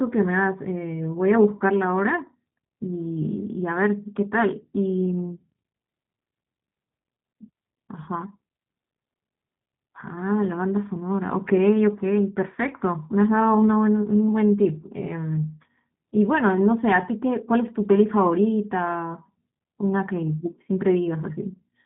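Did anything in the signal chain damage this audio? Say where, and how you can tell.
Yes. The damage comes from the codec stage and runs through the whole speech clip. This is G.729 codec damage, and it is plainly audible. Nothing above 4 kHz survives, so the voice sounds narrow and dull. It also has a rough, slightly synthetic texture. The codec does not store the waveform. It rebuilds each 10 ms frame from a vocal tract filter, a pitch predictor and a few pulses. That sparse model fits a low-rate stream of about 8 kbit/s.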